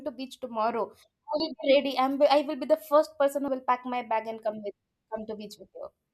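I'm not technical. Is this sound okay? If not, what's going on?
No. A dropped buffer (overrun) is heard at 1.4 s and again at 3.48 s: each time the speech jumps forward, with roughly 40 ms gone. The likely cause is the recording program falling behind, so each slice was overwritten and the edges spliced together.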